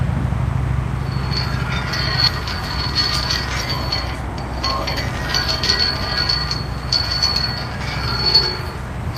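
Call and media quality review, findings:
Skip ahead at 2.27 s: roughly 0.7 s of sound dropped, jitter buffer probably discarded queued audio on overflow; playback jumps forward without a gap, latency falling about 0.7 s.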